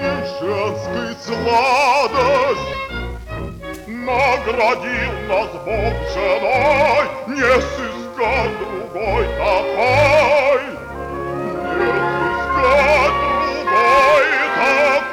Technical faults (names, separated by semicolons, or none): hard clipping; skip ahead; jitter buffer speed-up